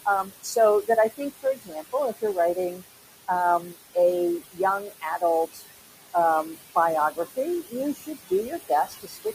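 Noise suppressor artifacts run through the whole clip. The suppressor pulls the room noise, which sits about 11 dB under the speech, down by about 18 dB in the gaps and releases it under the voice, so the residue pumps.

Speech cut by the noise suppressor occurs at 0.05–2.82, 3.6–3.96, 4.4–5.22, 5.53–5.63, 6.13–6.76 and 7.11–9.26 s. It mistakes soft speech for noise, dropping it by up to about 21 dB. Consonants and word endings, under a second in each of the longest stretches, sound swallowed.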